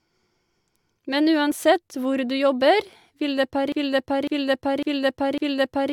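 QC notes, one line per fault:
3.72 s to the end, broken-record loop: The playback or stream most likely stalled and kept re-sending the last block it held, so from 3.72 s a 0.55 s slice of the speech repeats four times back to back, identical each pass. The speech that should have followed never arrives; the clip ends still cycling the same fragment instead of carrying the sentence forward.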